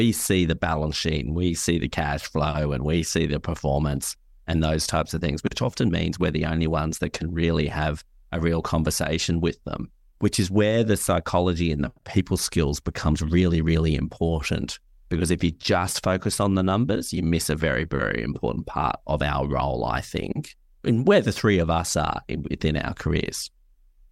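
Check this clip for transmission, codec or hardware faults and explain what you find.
No faults detected in this clip.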